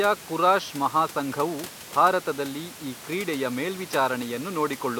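No technical fault can be heard in the speech, and the room's background noise sits about 40 dB and about 21 dB below it as part of the recording itself.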